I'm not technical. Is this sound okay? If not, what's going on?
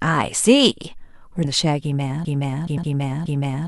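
No. At 1.44 s and again at 2.77 s, the speech jumps forward by roughly a third of a second. These are compressed frames skipped: around ten short chunks of the compressed file went missing or were rejected as damaged, so the player leaped past them.

From 2.25 s to the end, a piece of about 0.42 s plays over and over, four times in a row. This is a broken-record loop, likely from the player or stream stalling and resending its last fragment. The speech that belonged there is lost.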